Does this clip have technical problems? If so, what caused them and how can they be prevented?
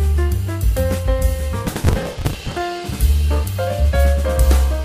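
Yes. Processor overload crackle runs from 1.67 to 2.57 s, a gritty tearing laid over the sound for just under a second. The processor couldn't finish its small audio buffers in time, roughly 5 ms each, and missed a long run of deadlines; each missed buffer was skipped, leaving a tiny hard-edged gap, and the rapid chain of gaps fuses into crackle. Prevent it by enlarging the buffer or reducing processing load.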